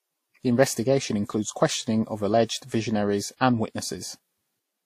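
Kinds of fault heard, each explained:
Transcoding between lossy codecs: likely passed through Vorbis then WMA, stacking their different artefacts; spectrogram shows nothing above 15.2 kHz across the whole speech clip.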